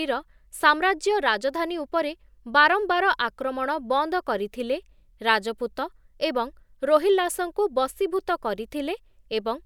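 Nothing technically wrong turns up in this bit of speech, so there's no fault to pin to a time or trace to a cause.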